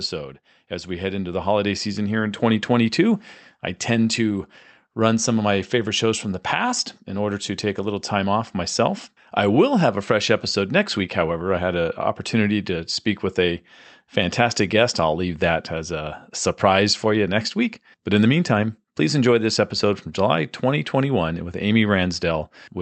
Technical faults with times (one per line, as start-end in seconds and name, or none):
0.69-2.42 automatic gain rising